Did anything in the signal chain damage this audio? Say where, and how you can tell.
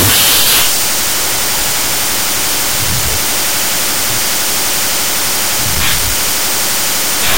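Yes. The damage is at the sample-format conversion stage, and it runs for the whole clip. Wrong sample width shows as loud broadband noise with the speech buried underneath, slowed to half speed and about an octave low. That fits 32-bit float data read as 16-bit integers: each sample splits into two values, doubling the sample count. Only the high halves carry the real waveform; the low halves add the noise.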